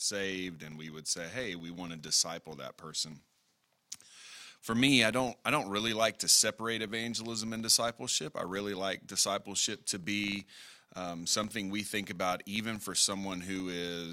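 A speech recording with a filter restarted on every block all the way through: each block kicks off from silence, leaving a small transient at its start, so there's a 25 Hz buzz, blocks every 40 ms, that swells and fades with the level of the speech.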